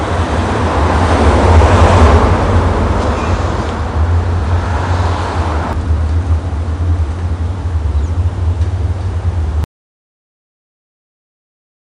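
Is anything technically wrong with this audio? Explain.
Yes. From 9.64 s to the end, an audio dropout to silence: likely a lost input while recording continued, leaving flat silence, a blank spectrogram and no room tone.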